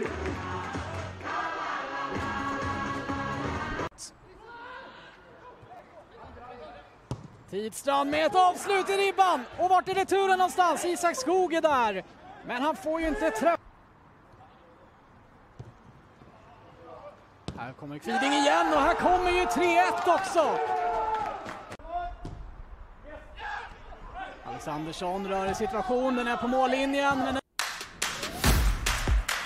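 Two brief stutters, each a repeated buffer, break this audio. At 5.77 to 5.79 s a short slice of about 10 ms sounds twice more, and at 7.33 s one slice plays once more. Each hiccup is heard as a click or quick buzz, and a small stretch of audio is skipped. New samples arrived late, so the device replayed its last block, which fits a 10 ms buffer. On a waveform, identical segments sit side by side with hard steps at the joins. A spectrogram shows thin vertical lines there.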